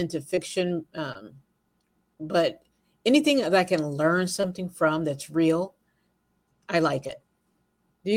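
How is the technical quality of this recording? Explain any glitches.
The recording is marred by four short concealed packet loss events, at 0.35–0.39 s, 1.13–1.17 s, 4.41–4.45 s (just before "from that's real") and 7.07–7.11 s (just after "I like"). Each time about 20 ms of audio arrived too late. The decoder extended the preceding sound and then blended back, leaving a brief smear or wobble.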